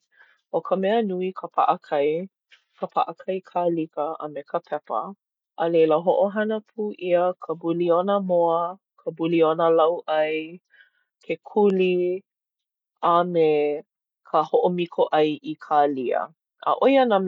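A speech recording with nothing technically wrong to point to. No moment in it calls for a time or a cause.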